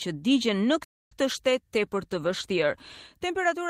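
From 0.72 s to the end, a call bitrate drop takes hold: the encoder's budget falls from 32 kbps to 18 kbps, so the sound is coded more coarsely and turns rougher and watery. On a spectrogram, fine detail gives way to smeared, blocky patches, and the upper bands look thinner.

At 0.84 s, shortly after that drop begins, a playback stall cuts the sound off for about 267 ms, until 1.12 s, before it carries on. The waveform shows a flat, dead gap there, and the spectrogram a blank vertical strip. The likely cause is the player running short of data or being blocked.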